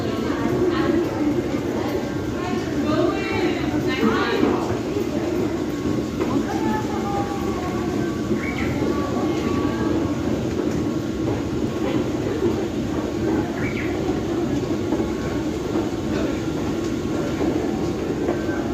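Tiny skips at 3.72, 5.71, 7.69, 11.67, 13.67 and 15.65 s, roughly every 2 s, reflect overlap between stream segments: overlapping timestamps trimmed 5 to 17 ms, making the waveform jump.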